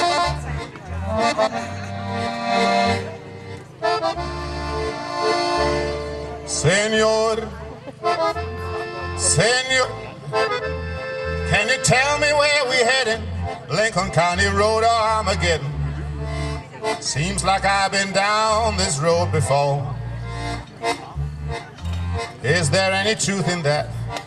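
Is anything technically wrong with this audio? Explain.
Yes, there are two kinds of fault.

A skip ahead at 9.83 to 9.85 s drops nearly half a second of queued audio, so playback lurches forward with the two sides joined almost directly.

Jitter buffer speed-up follows at 10.11 to 10.52 s (107 %) and 12.12 to 14.17 s (105 %). Repeated pitch-period cuts drain excess buffered delay, so the sound runs slightly hurried at unchanged pitch.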